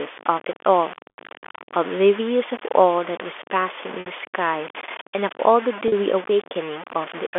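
From start to finish the speech carries a gritty, grainy distortion that tracks its level, quite loud and not far below the speech, likely from truncating to about 5 bits without dither. Then there's packet loss with pitch repetition at 1.1 s (80 ms), 4.0 s (60 ms) and 5.88 s (40 ms): the last pitch period gets repeated over each gap, so you hear a brief held, buzzy tone.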